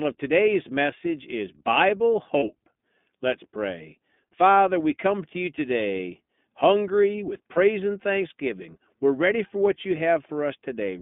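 Throughout the speech, the iLBC codec confines everything to roughly 150 Hz to 3.5 kHz, so a spectrogram shows a hard ceiling with nothing above it. The voice sounds plainly rough and synthetic, and each frame's excitation is coded independently, in the 20 ms, 15.2 kbps mode.

From 2.38 to 2.44 s, lost iLBC frames leave a 40 ms gap that the decoder fills by repeating the last pitch cycle with added noise. It sounds like a brief buzzy, held vowel, and on a spectrogram the harmonics run flat and smeared. A shorter 20 ms loss follows at 7.54 to 7.58 s, between "you today hungry with" and "and thanksgiving". Each time, the voice recovers almost at once.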